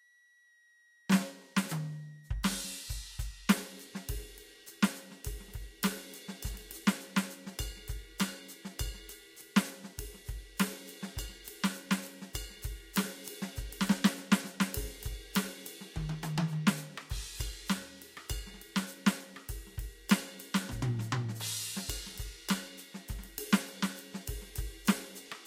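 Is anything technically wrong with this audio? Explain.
Yes. A switching supply whistle runs through the whole music clip. It is a high tone near 2 kHz, wandering between 1.89 and 1.97 kHz, about 30 dB below the music. A power supply is switching at an audible rate or beating with another supply.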